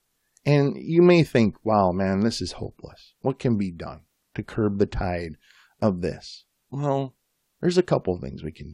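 A short recording of speech with no technical faults to report. Nothing in the audio points to a problem anywhere in its chain.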